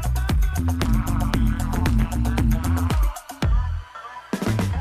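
From 0.59 to 2.92 s, overlap-add ripple appears. Frames were rejoined with uneven overlap, so level pulses about 60 dB deep around 150 times a second, giving a metallic buzz with extra tones around each note.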